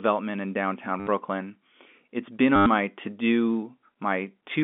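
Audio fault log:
1.00–1.07 s and 2.56–2.66 s, packet loss with last packet repeated: packets went missing for 70 ms and then 100 ms, and the receiver replayed the last one. Each run produces a brief robotic stutter with a 100 Hz buzz, which fits 10 ms packets.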